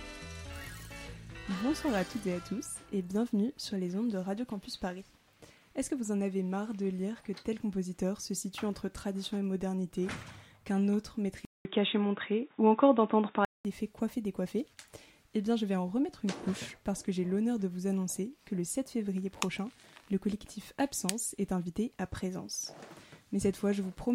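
From 11.45 s to 13.65 s the input was likely switched to a poorer device, with the recording path moving to a narrower-band microphone for about two seconds. A brief gap of roughly 200 ms marks the change. After it the sound loses everything above about 3.8 kHz and turns dull and boxy, the level shifts by a few decibels, and a faint new background noise appears well below the signal until the original input returns.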